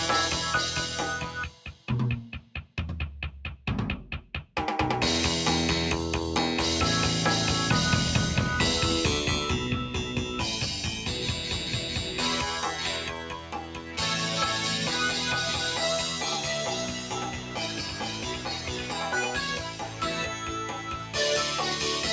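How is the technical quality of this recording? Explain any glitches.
The recording is compromised by a speech noise suppressor that was left active on non-speech material, producing audible level pumping.

Noise suppressor applied to music or sounds: Throughout the clip, the suppressor treats sustained and ambient content as noise and keeps pulling it down, with gain swinging by around 10 dB. Onsets pass through largely intact while anything held or decaying gets attenuated, so the level pumps and the texture thins between transients. The band also stops at 8 kHz, consistent with call microphone processing.

Sound cut by the noise suppressor: Distinct dips occur at 1.49–1.88 s, 2.38–2.77 s, 4.25–4.56 s, 13.21–13.98 s, 16.86–18.94 s, 19.58–20.02 s and 20.66–21.15 s. In each, the suppressor judged the content to be noise and cut it by about 7 dB (about 6 dB in the 19.58 s event). The longest, about two seconds from 16.86 s, is heard as a sustained sag.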